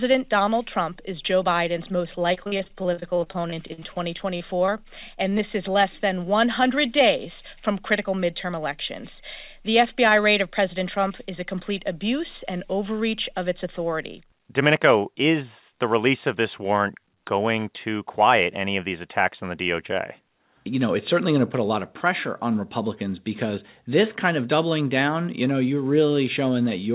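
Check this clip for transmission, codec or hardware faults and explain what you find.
Four transmission faults appear, all from packet delivery on a narrowband call path whose audio stops at 4 kHz. That band limit fits a G.711 telephone codec.

Repeated packet loss (robotic sound), 2.34 to 4.70 s: Packets kept failing to arrive over this stretch, with the longest gap about 46 ms. The receiver covered each hole by extending the previous sound, so about 471 ms of the span is synthetic fill and about 360 ms of real audio is gone. The speech turns choppy, with fragments missing.

Short stall from a late packet, 5.30 to 5.34 s: One packet arrived late, and the jitter buffer briefly ran dry. The receiver held the last sound for about 20 ms until the packet came in, then continued from the same point, adding about 20 ms of delay. No speech is lost, but one sound is drawn out slightly, with a faint buzz or dip.

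Short concealed packet loss, 5.38 to 5.41 s, just before "is less than": A piece of audio never reached the decoder in time. About 10 ms of fill replaced roughly 20 ms of real speech before the decoder blended back into the incoming signal. The result is a brief smear or wobble just before that phrase, and a very short sound there could be lost.

Jitter buffer speed-up, 10.46 to 11.11 s, just before "is a complete abuse": The buffer had built up more audio than it targets. To reduce the delay, the receiver cut out short pitch-period slices one after another, removing about a twentieth of a second in total. The speech runs at about 106% speed with unchanged pitch, so it sounds slightly rushed.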